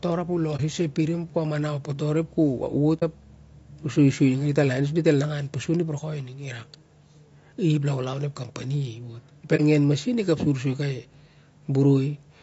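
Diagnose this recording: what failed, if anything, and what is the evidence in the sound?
The codec stage shows damage throughout this speech. The voice is rough and grainy, with noise filling the gaps between harmonics and a thin, synthetic-sounding top band. The likely cause is low-delay AAC compression (AAC-ELD) at a low bitrate, with the damage pointing to something around 32 kbps. Its short frames resolve pitch harmonics poorly and leave few bits per frame. On a spectrogram the harmonic stripes look smeared, with speckled energy between them and a patchy upper band.

AAC frame loss with muting, also at the codec stage, leaves three brief soft-edged holes, at 0.56 to 0.60 s, 2.99 to 3.03 s and 9.56 to 9.61 s. Each silent gap lasts about 30 ms, which fits a single dropped frame whose spectrum the decoder set to zero. The overlapping windows fade the sound out and back in. A waveform shows each one as a smooth taper down to near silence and back. 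A spectrogram shows each as a narrow vertical gap with blurred edges.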